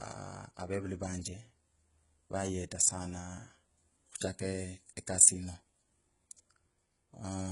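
Right through the speech the treble is gritty and lispy, with nothing above 11.1 kHz, likely HE-AAC compression at a very low bitrate, around 12 kbps, faking its top end.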